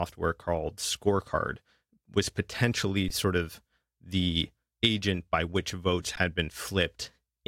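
At 3.08 to 3.10 s, just before "sort of the agent", the speech stops for about 20 ms. This is an underrun with held sample. The output buffer ran dry, and the converter held its last value. The waveform sits flat. Nothing appears to be lost, so the speech resumes where it paused, with only a soft edge. The same thing happens at 6.16 s, right after "agent by which votes", lasting about 15 ms.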